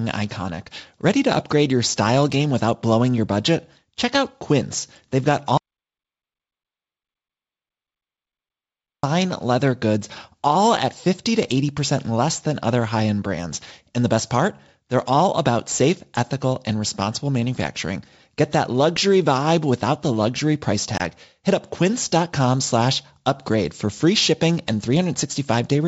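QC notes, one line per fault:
5.58–9.03 s, audio dropout to silence: about 3.5 s of silence with no room tone, likely a lost input; sound resumes hard on "leather goods all at".
20.98–21.02 s, packet loss on an ADPCM call: after "without the luxury price", a hard 20 ms hole of about one packet, then brief distortion while the G.722 decoder's predictor resynchronises, unlike a clean dropout.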